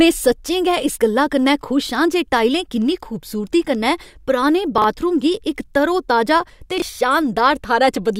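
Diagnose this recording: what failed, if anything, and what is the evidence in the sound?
Chunks out of order at 4.78 to 4.84 s and 6.78 to 6.82 s, heard as brief jumbled moments. In the buffer or network stage, a 20 ms chunk played late: two chunks late, then one. Nothing is lost, but each swap leaves three hard joins.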